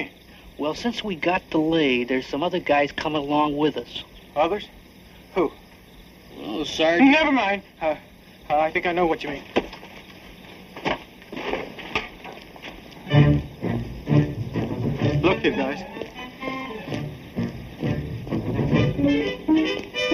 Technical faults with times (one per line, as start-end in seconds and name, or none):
0.00-20.13 channel delay (comb filtering)